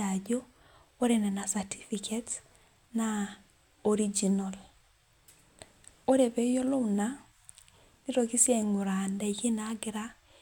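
Speech recording, and nothing is technically wrong with it.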